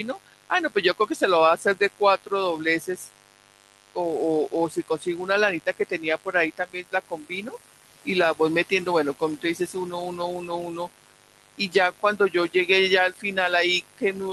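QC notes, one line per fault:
Throughout: mains buzz. A rectifier, dimmer or unshielded lead is letting sharp switching spikes from the 50 Hz supply into the signal path, twice per cycle, so harmonics stack up well into the kilohertz range. The result is a steady, raspy buzz sitting only about 15 dB below the speech.
Throughout: noise suppressor artifacts. The suppressor is treating the buzz and room background as steady noise and pulling those bands down frame by frame, hardest in the gaps and less under speech. The background therefore breathes, dropping between phrases and surging back with each one. The room noise itself, which climbs by about 17 dB around 7 s, is part of the recording.
0.14–1.21 s, 1.57–2.32 s, 2.65–3.97 s, 4.48–5.29 s, 5.6–12.69 s, 13.12–13.37 s, 13.82–14.16 s: speech cut by the noise suppressor. In each span the suppressor misjudges parts of the speech as noise and attenuates them along with the background, by as much as 15 to 19 dB at worst. 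Soft consonants, word endings and quieter stretches sound swallowed or fade out. The longest run, 5.6 to 12.69 s, loses around three seconds in total and overlaps the rise in room noise.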